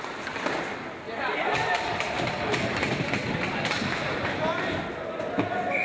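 Nothing's actually wrong here; the audio just carries the ordinary character of a call path, with nothing above 8 kHz, which fits a wideband call codec like G.722 at around 64 kbps.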